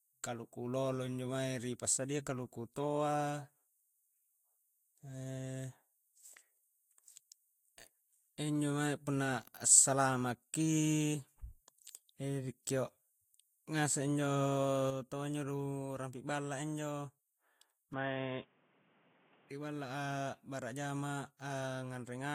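Throughout, the speech carries smeared, watery artefacts and a spectrogram shows a hard ceiling at 16.7 kHz, likely low-bitrate audio saved at a high bitrate, its earlier losses preserved.

From 17.93 to 19.50 s the sound turns boxy, the spectrogram emptying above 3.6 kHz, with a shift in level and a new noise floor, likely an input switched to a poorer device.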